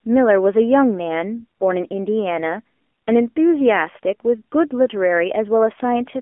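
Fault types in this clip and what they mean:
AMR narrowband mobile codec: the speech has been squeezed through the old 2G/3G phone codec, so everything sits in a narrow 250 Hz to 3.4 kHz band, and the voice comes out plainly buzzy and synthetic, which fits a low 7.4 kbps mode.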